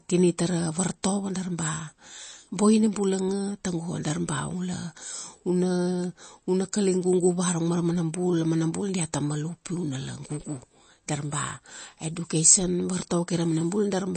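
From the start, the speech has a watery, swirling quality with nothing above 8.3 kHz. This is plainly audible MP3 compression, likely at a low bitrate near 32 kbps. A spectrogram shows a flat ceiling at 8.3 kHz and weak components flickering between frames.

At 1.03 s there is pre-echo: an attack falls late in a transform block, so the quantisation noise spreads about 13 ms ahead of it. It sounds like a brief hiss before a softened onset and shows as noise just before the waveform's sharp rise.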